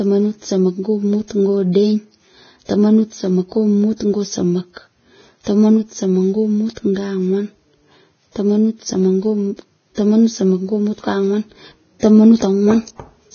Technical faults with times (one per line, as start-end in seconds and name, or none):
0.00-13.34 Vorbis compression